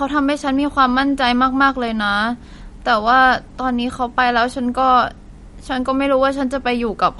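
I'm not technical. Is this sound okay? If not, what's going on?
No. Throughout the recording the speech sounds watery and swirly, with a dull top end: nothing above about 11.2 kHz, so s sounds lose their crispness and carry a metallic fizz. The likely cause is MP3 compression at a low setting. To save space, the format drops the quietest details of the sound and trims off the highest frequencies. Those details flicker in and out from moment to moment, which creates the swirling.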